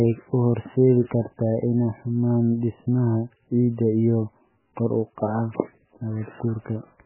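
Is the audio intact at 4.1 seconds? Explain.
No. At 4.1 s the speech carries MP3 compression damage that runs through the whole clip. With very few bits, likely around 8 kbps, the encoder cuts everything above 2.9 kHz and drops weak frequency lines frame to frame, leaving the speech dull, watery and swirly.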